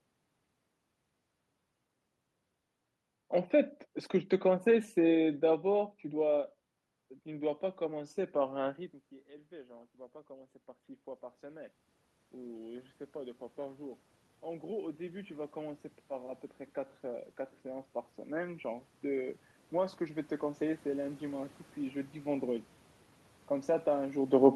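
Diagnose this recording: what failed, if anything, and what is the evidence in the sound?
Automatic gain rising, in the call processing stage. From 7.0 s to 22.5 s the level climbs by about 19 dB. The room noise swells along with the voice, so this is gain, not the talker moving. The control judged the input too quiet and raised it.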